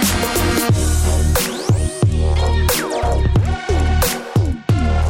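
Nothing in this one jumps out as a technical problem; there's no glitch or hiccup to point to anywhere along the way.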